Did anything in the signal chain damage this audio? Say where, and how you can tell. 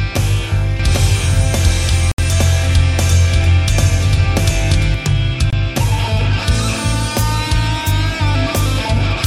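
Yes. A doubled audio track, likely from a slower second capture path, runs from 0.80 to 4.94 s, with an equally loud copy trailing about 0.7 s behind.

Bluetooth stalls at playback, likely interference draining the headphones' buffer, drop the sound to silence from 2.12 to 2.19 s and from 5.50 to 5.53 s.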